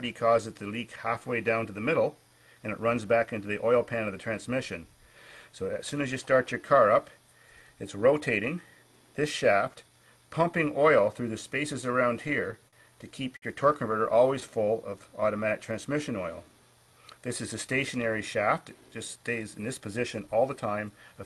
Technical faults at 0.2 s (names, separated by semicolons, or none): none